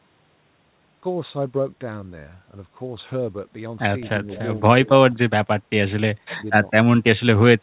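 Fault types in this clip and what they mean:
Echo leak: from 4.35 to 4.41 s a brief copy of the speech returns roughly 220 ms late, well below the main speech at around 25 dB down. This is likely a loudspeaker echo that the far side's canceller failed to remove and sent back.
Speech suppressed in double talk: at 5.09 to 5.49 s, 6.18 to 6.46 s and 6.83 to 7.2 s the speech drops away, by up to around 30 dB, for roughly 300, 300 and 150 ms in total. This is likely an echo canceller turning down its own talker during double talk.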